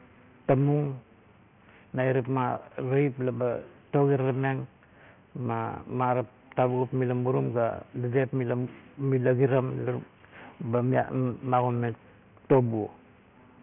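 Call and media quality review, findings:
Aliasing throughout the speech. Sample-rate reduction with no anti-alias filter, which fits a drop from 44.1 kHz to 6 kHz. Content above the 3 kHz fold lands back at false pitches, roughly 25 dB below the speech. Sibilants gritty and metallic, with the spectrum packed hard against 3 kHz.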